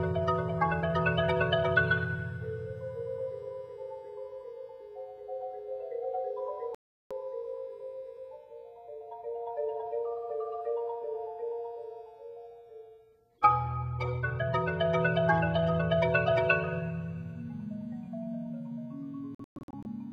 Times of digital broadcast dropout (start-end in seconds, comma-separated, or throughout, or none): 6.75-7.11, 19.35-19.86